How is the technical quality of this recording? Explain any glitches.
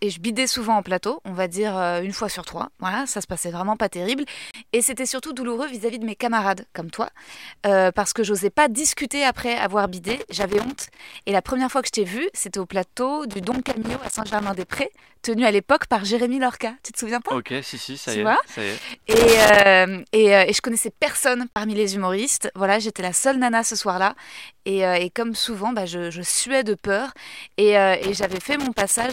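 The recording has two kinds of glitch: brief dropouts and recurring bursts of crackle.

A block of digital silence occurs twice, at 4.51 s and 21.53 s, each about 30 ms long. The samples in that span were zeroed, likely because the output buffer wasn't filled in time. The speech stops dead and resumes with no fade, so each dropout sounds like a short hole. On a waveform it appears as a flat line. On a spectrogram it appears as a thin vertical gap.

Loose connector crackle occurs four times: 10.09 to 11.21 s, 13.31 to 15.11 s, 18.78 to 19.66 s, and from 28.03 s to the end. A contact somewhere in the signal path is making and breaking rapidly, chopping the speech. Any DC on the line turns into pops. It sounds like irregular scratching laid over the voice. On a waveform the envelope looks torn, with sharp spikes. On a spectrogram it shows as scattered vertical broadband flecks across those spans.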